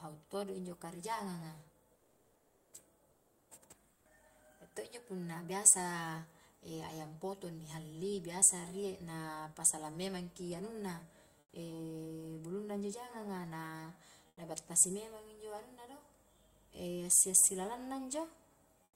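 In the pauses at 1.95–2.73, 3.11–3.49, 3.93–4.05, 11.39–11.53 (after "pasalang memangki anunna"), 14.27–14.37 (before "battasi memang injo anunna") and 18.83–18.96 s, comfort noise replaces the real background. It is flat, featureless hiss about 2 to 5 dB quieter, and about 17 dB quieter in the last gap. This is likely Opus DTX muting the gaps.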